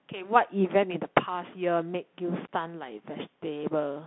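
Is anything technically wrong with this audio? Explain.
Yes. For the whole clip, the speech carries the sound of a Bluetooth CVSD headset codec. The band sits at roughly 150 Hz to 3.5 kHz, with nothing above 3.8 kHz. CVSD sends a single up-or-down bit per sample and adapts its step size, which fits a 64 kbps headset link. Fast, loud high-frequency content outruns the step and distorts, s sounds turn scratchy, and a granular hiss sits beneath the speech.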